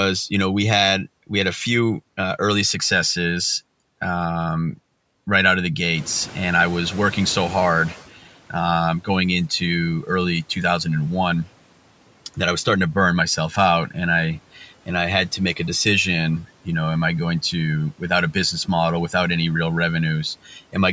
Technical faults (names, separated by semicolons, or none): noise suppressor catching up; speech cut by the noise suppressor